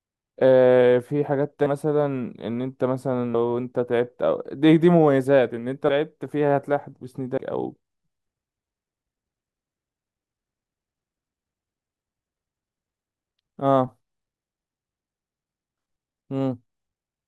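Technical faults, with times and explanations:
1.66, 3.34, 5.88, 7.37, 14.47 and 15.77 s: compressed frames skipped. At each point the speech jumps forward. Roughly 100 to 200 ms goes missing at each of the first five. At 15.77 s about half a second vanishes. The jump sizes fit whole 24 ms frames that were lost or rejected by the decoder.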